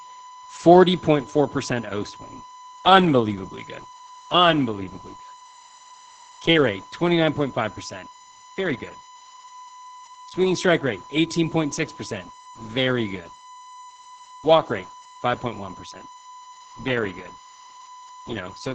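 Throughout the clip, current drawn by the USB bus in 1 ms frames leaks into the audio path through power or ground, producing a USB whine: a steady 1 kHz tone, strongest at its fundamental, sitting at roughly 20 dB below the speech.

Also throughout, Opus voice compression running in its SILK linear-prediction mode at a low rate, which points to about 12 kbps, codes the excitation coarsely. The speech sounds plainly muffled, hoarse and somewhat robotic, and nothing is heard above about 8.6 kHz.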